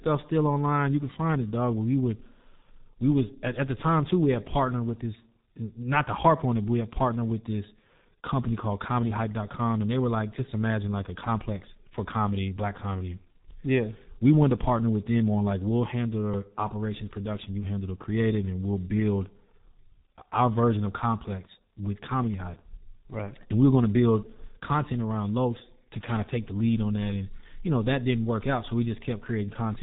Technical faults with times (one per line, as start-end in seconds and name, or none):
0.00-29.83 G.723.1 codec